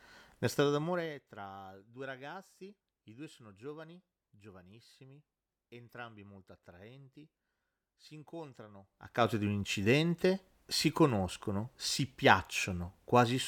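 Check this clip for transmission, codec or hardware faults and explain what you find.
One fault turns up: zipper noise from 0.52 to 1.30 s, as the speech level drops by roughly 20 dB in unsmoothed 2 dB steps, around twenty a second. Each jump clicks, so the fade ticks and zips rather than gliding.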